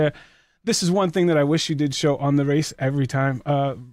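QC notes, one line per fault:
No technical faults were detected in the signal.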